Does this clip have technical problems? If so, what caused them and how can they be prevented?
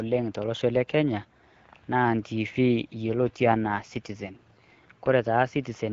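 Yes. An AMR rate drop runs from 2.93 to 4.36 s, starting right after "naa ntiivi". The speech turns rougher and more synthetic there, which fits the AMR-WB link dropping from 12.65 to 8.85 kbit/s as the network shifts bits from the speech itself to error protection on a weak radio link. On a spectrogram the band stays at full width up to 7 kHz with no gap, but harmonics look smeared and noisier. The waveform stays continuous. The wideband codec's light colouring is present throughout. Preventing it means keeping the handset in stronger coverage, or using Wi-Fi calling, so the link never has to lower its rate.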